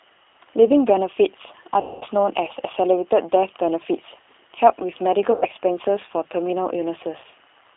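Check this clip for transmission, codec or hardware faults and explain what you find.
Two faults are present: low-bitrate codec coding throughout, and three packet-loss gaps filled by codec concealment.

G.729 codec, whole clip: speech is rebuilt from a filter, pitch predictor and sparse pulses, which fits an 8 kbit/s G.729A stream. The band is confined to 300 Hz–3.7 kHz, and the speech sounds plainly rough and synthetic.

VoIP packet loss concealed by the speech codec, at 1.81–2.04 s, 5.32–5.45 s and 7.18–7.26 s: the decoder extrapolates the last frame, so 200, 100 and 60 ms of missing audio become a buzzy tone or coloured noise that fades, with weak recovery afterwards.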